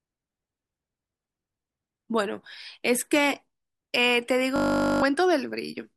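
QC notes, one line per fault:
4.56–5.02 s, system hang loop: the system froze while the hardware kept replaying one 20 ms buffer, so a steady 50 Hz buzz replaces roughly half a second of speech.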